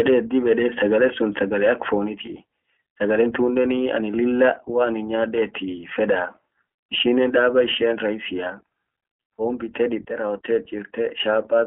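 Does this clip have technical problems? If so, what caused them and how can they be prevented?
Yes. The iLBC codec runs throughout: the speech is confined to about 250 Hz to 3.4 kHz and sounds plainly rough and synthetic, which fits 15.2 kbps with 20 ms frames. Unlike a plain low-pass, the grain comes from coarse excitation coding. Sending wideband audio over a higher-bitrate codec prevents this.

Lost iLBC frames occur at 2.26 to 2.30 s, right after "sagale sun sagale ak". One frame of about 20 ms is filled by a repeated pitch cycle mixed with noise, giving a brief buzzy held sound. Unlike a dropout, there is no silence, and the speech recovers immediately. Forward error correction or a jitter buffer prevents this.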